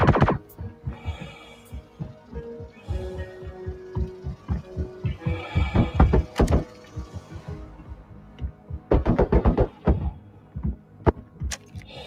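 A speech-tuned noise suppressor applied to music or sounds treats steady and decaying material as noise, so the level swings by around 10 dB as sustained parts are pulled down while attacks pass. A waveform shows a pumping envelope, and a spectrogram shows held energy and tails fading early. Sound cut by the noise suppressor is clearest at 0.40–0.56 s, 1.48–2.33 s, 2.69–2.88 s, 6.69–7.33 s, 7.78–8.90 s, 10.19–10.56 s, 10.76–11.41 s and 11.58–11.83 s, dropping about 5–7 dB. These show as shrunken waveform stretches and dimmed spectrogram bands.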